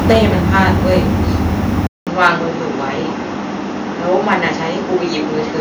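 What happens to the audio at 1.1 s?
At 1.1 s you're in the middle of a stretch of microphone overload running from about 0.05 to 1.53 s. The peaks were cut off at the converter's limit, a few percent of samples clipped, giving the loudest syllables a harsh crackle, likely from input gain about 7 dB too hot.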